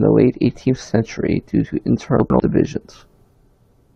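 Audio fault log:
2.2–2.4 s, chunks out of order: two 100 ms pieces of speech play swapped, the later one first, giving a brief jumbled stretch with three hard joins. Unlike a dropout or stutter, no audio is missing or repeated; it is only rearranged.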